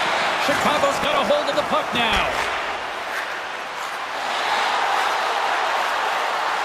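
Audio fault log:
0.97–1.3 s: processor overload crackle. The processor falls behind and misses buffer deadlines in a row, which suggests around fifteen misses. Each one repeats a scrap of old audio with hard edges. The clicks fit buffers of roughly 10 ms, so they blur into gritty crackle.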